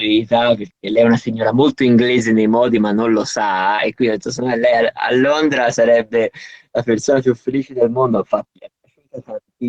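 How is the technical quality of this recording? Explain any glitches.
The recording has a handful of brief network glitches, all tied to lost packets on a call.

At 3.75 to 3.80 s there is short concealed packet loss. About 20 ms of audio never reached the decoder in time. The receiver stretched the preceding sound over roughly 25 ms, then blended back into real audio. You hear a quick smear or wobble. A short consonant there can drop out.

The lost packet rebuilt from error correction occurs four times: at 3.78 to 3.80 s, overlapping the concealment, then at 5.20 to 5.26 s, 7.02 to 7.08 s, and 8.30 to 8.32 s. The 20 ms events point to single lost packets. The 40 ms ones fit two separate lost packets. Each following packet carried a low-bitrate backup copy, and the decoder played that instead of leaving a gap. Those moments sound briefly rougher and grainier.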